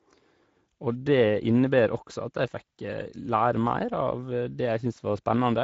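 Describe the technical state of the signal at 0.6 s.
At 0.6 s the speech carries Speex codec damage, present from start to end. Starved of excitation bits, this CELP coder makes speech hoarse and noisy, fitting a rate near 17 kbps, with nothing above 7.7 kHz. That grainy roughness, unlike the swirly warble of transform codecs, marks it.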